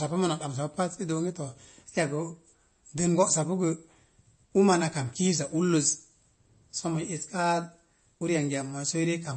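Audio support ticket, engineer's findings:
Throughout the speech: dull, band-limited top end, nothing above 8.3 kHz; watery, swirling texture, clearly audible. Likely cause: MP3 compression at a low bitrate, consistent with roughly 32 kbps. Mechanism: starved encoder applies fixed treble cutoff, drops weak frequency lines that flicker frame to frame.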